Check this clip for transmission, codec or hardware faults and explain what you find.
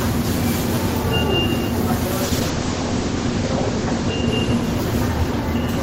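One fault is present: a call bitrate drop. From 2.25 s to the end, the sound turns rough and muffled, with everything above 8 kHz gone where it previously extended to 20 kHz. The coarse, watery texture is worst for about 1.1 s. It points to the call's bandwidth estimate falling and the encoder being pushed from roughly 40 kbps down to about 11 kbps, forcing coarser coding and a narrower band.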